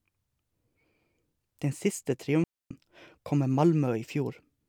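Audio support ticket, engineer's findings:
Digital wireless dropout, 2.44 to 2.71 s, just before "kom med": speech cuts to near silence for about 0.27 s. Probable component is the digital wireless receiver, which mutes after losing too much link data. There is no hiss or crackle on either edge and the fade is very short, so this is a receiver mute, not an analogue RF dropout with a noise burst or a codec glitch with smeared or warbled audio.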